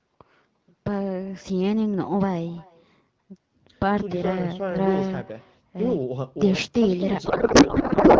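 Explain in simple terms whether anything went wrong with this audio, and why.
Two things went wrong. The first runs through the whole clip: an echo with no canceller. The far end's loudspeaker leaked back into its microphone, so every phrase returns faintly about a third of a second later as a thin shadow that nothing removed.

The second starts at 7.25 s and lasts to the end: a codec payload misread. The two ends disagreed on how the AMR bits were packed, and the sound points to one side sending octet-aligned frames while the other read them as bandwidth-efficient. The decoder pulled its values from the wrong places, so the speech turns into garbled warble.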